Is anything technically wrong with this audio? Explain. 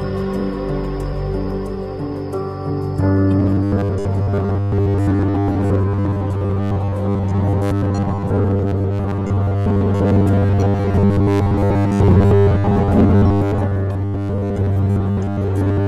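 Yes. From 3.39 s to the end at 15.87 s there is robotic sound from repeated short buffers. New audio likely arrives too seldom, so over most of that span a short slice, which fits 10 ms, is replayed while real audio is skipped. This imposes a rigid, metallic 100 Hz buzz that only roughly follows the original.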